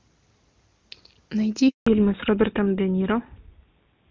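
At 1.69 s there's a handover gap: the call jumps networks, the speech cuts off and we get about 180 ms of dead air until 1.87 s. Right after, from 1.87 s to the end, it falls back to narrowband. The clear HD Voice sound, which fits AMR-WB at its top rate, gives way to a duller, rougher sound with nothing above 4 kHz, consistent with old GSM full rate.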